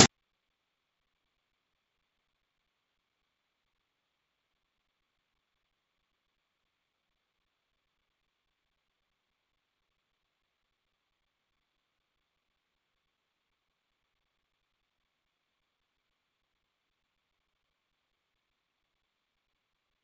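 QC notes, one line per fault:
The speech runs over G.722 wideband telephone coding at 64 kbit/s, with bandwidth reaching about 7 kHz and any coding trace at most faint.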